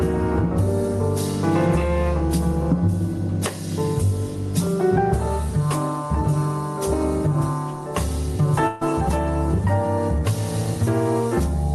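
Throughout, the background swells in pauses and ducks under each loud sound by roughly 10 dB: gain pumping, likely from excessive input gain hitting a fast limiter. From 8.67 to 8.83 s a burst of packet loss drops about 140 ms, concealed by a fading extension of the preceding sound before playback resumes further on, below a call-codec band limit near 12 kHz.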